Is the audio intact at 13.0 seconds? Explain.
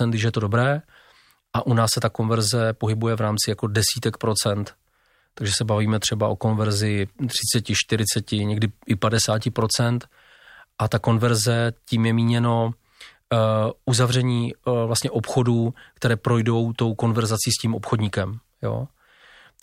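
Yes, the speech at 13.0 seconds is intact, with no audible fault at that moment.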